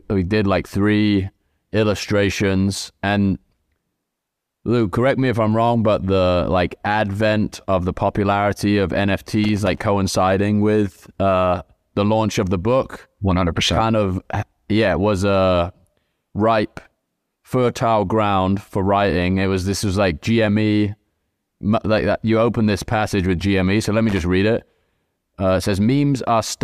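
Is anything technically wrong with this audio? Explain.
Yes. Irregular scratchy crackle bursts break into the speech at 9.44–9.82 s and 24.09–24.22 s: loose connector crackle, where a worn contact rapidly makes and breaks, chopping the signal.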